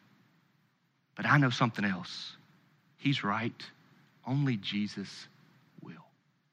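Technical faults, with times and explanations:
No technical faults are present.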